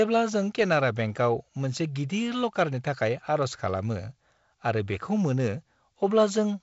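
Nothing stood out on listening to this speech recording.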